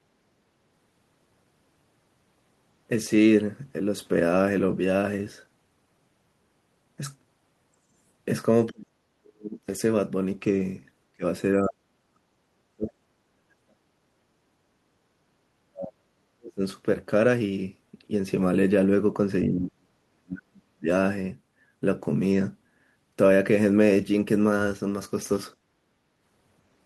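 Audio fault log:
8.69–9.59 s, 11.13–11.23 s, 11.61–12.33 s, 12.72–13.97 s, 15.53–16.62 s, 19.47–20.87 s: speech suppressed in double talk. The speech dips by roughly 40 dB (nearer 25 dB at 11.13 s), likely from the echo canceller clamping during overlapping talk. These show as waveform troughs and faded spectrogram bands.
14.97–15.22 s: background gated by the echo canceller. The room sound drops about 16 dB while the far end plays, which shows as a brief notch in the waveform's noise floor.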